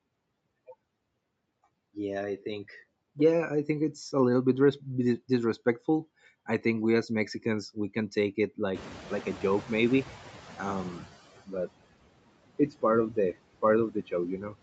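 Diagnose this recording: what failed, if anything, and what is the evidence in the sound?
Noise suppressor artifacts run through the whole clip, from the call processing stage. The background is pulled down by about 20 dB in gaps and swells back under speech. A spectrogram shows patchy, flickering low-level noise between syllables.

The noise suppressor is catching up from 8.74 to 11.22 s. The room noise jumps by about 17 dB near 8.5 s, and the suppressor's estimate needs about 2.5 s to adapt. The louder noise passes through at first, then settles to about 16 dB of reduction, visible as a brighter noise floor fading out.

Speech is cut by the noise suppressor at 13.91 to 14.13 s, dipping by about 13 dB, and at 14.38 to 14.55 s, dipping by about 9 dB, roughly a tenth of a second each. Quiet speech energy was misjudged as noise and gated, so the waveform shows sudden notches and the spectrogram shows missing speech energy. 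The spectrogram is empty above 8 kHz, which matches the call's bandwidth.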